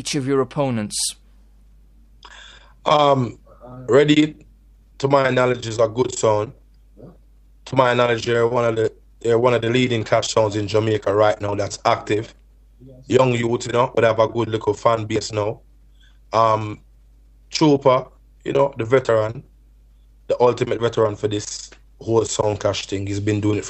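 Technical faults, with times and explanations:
No technical faults were detected in this recording.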